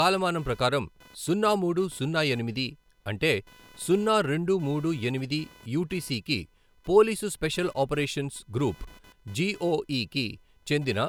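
Computer activity noise runs through the whole recording, from start to end. A faint buzzing texture pulses at around 500 Hz and sits roughly 30 dB below the speech. It rises and falls independently of the talking, because it follows the computer's own workload rather than the audio. Shifting current draw from the processor, graphics hardware or mouse disturbs the ground that the audio circuit shares, and those fluctuations leak into the signal as chirpy interference.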